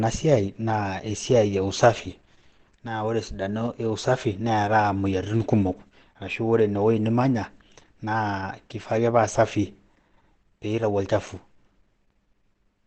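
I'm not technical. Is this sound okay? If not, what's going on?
No. The speech sounds muffled and hoarse from start to finish. Nothing is heard above about 8.7 kHz, so the crisp top end is missing. This is likely Opus compression, squeezed hard into its speech mode, which throws away detail to save space.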